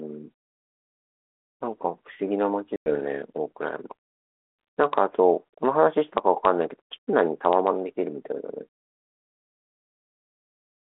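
At 2.76 s the speech drops into a hard-edged hole of about 100 ms, which fits a run of roughly five lost packets, and the disturbance lasts until 2.95 s. This is packet loss on an ADPCM call: the gap is filled with silence, and the decoder's adaptive predictor and step size lose track of the sender's. When audio resumes, it comes back slightly distorted, then settles within some tens of milliseconds as the decoder re-converges. A waveform shows a flat-line cut, then the signal resuming. A spectrogram shows a blank vertical strip across the 300 to 3400 Hz band of the 32 kbit/s G.726 line.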